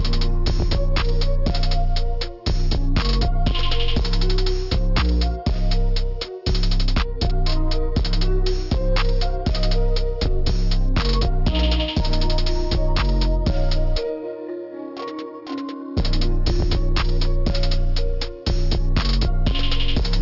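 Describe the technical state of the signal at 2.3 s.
At 2.3 s, as throughout, there is aliasing. Content above 6 kHz folds back to unrelated pitches, which points to a resample to 12 kHz without filtering. Unlike plain band-limiting, which only dulls, it sounds gritty and metallic, with the folded energy roughly 15 dB below the signal.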